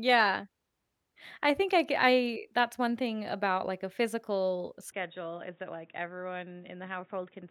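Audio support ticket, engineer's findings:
Speech goes dull and boxy from 4.92 s, right after "about like a physical", to the end. Band tops out at 3.8 kHz, level drops a few dB, new noise sits roughly 35 dB under the speech, no gap at the switch. Likely an input switched to a poorer device, so the rest is captured through narrower, noisier hardware.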